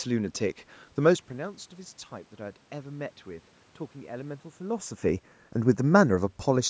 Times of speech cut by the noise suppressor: none

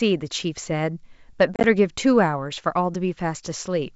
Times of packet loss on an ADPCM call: 1.54-1.64

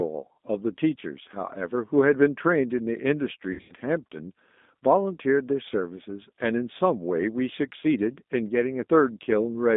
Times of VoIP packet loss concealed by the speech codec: 3.53-3.73

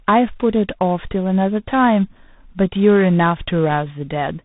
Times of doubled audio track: none

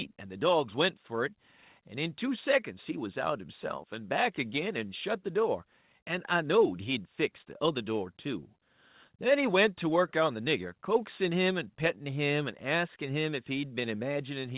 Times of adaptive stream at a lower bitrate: none

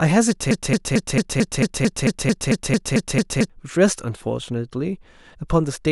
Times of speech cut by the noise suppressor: none

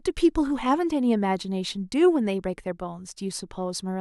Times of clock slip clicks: 0.16-3.90

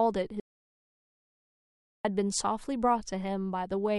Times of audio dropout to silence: 0.40-2.05

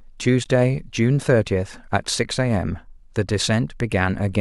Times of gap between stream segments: 0.44

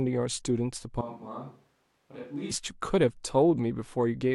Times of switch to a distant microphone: 1.01-2.51

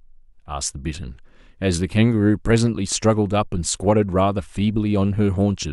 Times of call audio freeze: none

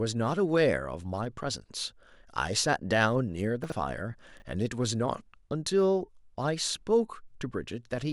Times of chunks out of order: 3.64-3.72, 4.38-4.42

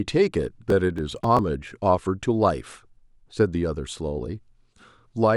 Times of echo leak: none

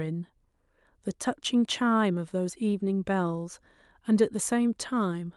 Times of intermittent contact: none

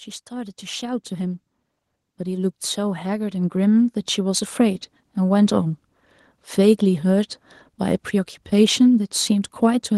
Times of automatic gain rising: 2.17-4.60

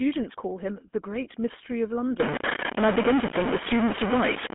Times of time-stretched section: none

